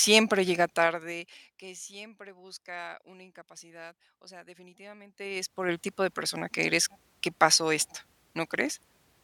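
Zipper noise shows up twice in this speech. From 0.57 to 1.58 s, just before "que siempre busca una", the level drops roughly 25 dB in unsmoothed 2 dB steps, about ten a second, so you hear a ticking ride along. From 5.07 to 5.71 s it climbs back up roughly 25 dB at around twenty steps a second, a faster zip, leading into "tipo de persona que".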